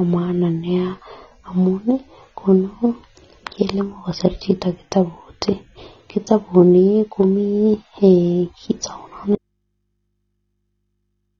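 Throughout the speech, the encoder was most likely starved of bits, with the dull, smeared top end and warbling sibilants plainly audible as AAC compression artefacts. That points to AAC-LC at a low rate, around 24 kbps, forcing a lowered cut-off and spectral holes.

From 9.35 s to the end, the signal path lost its source but stayed live, likely a disconnected input. The speech drops out abruptly to a faint residue of mains hum, roughly 55 dB below the former level, with no fade or recovery.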